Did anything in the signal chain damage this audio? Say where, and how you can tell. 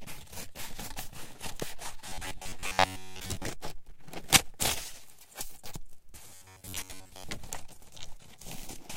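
Yes. Robotic sound from repeated short buffers appears from 2.08 to 3.47 s and again from 6.30 to 7.24 s. In both stretches a rigid, metallic buzz at 93.8 Hz sits over the sound, which keeps only its rough outline. The damage likely comes from the driver or buffer stage. Audio arrived too late, so a segment of about 10.7 ms was looped to fill the gaps while most of the real material was skipped. Repeating that fixed length is what imposes the steady 93.8 Hz tone.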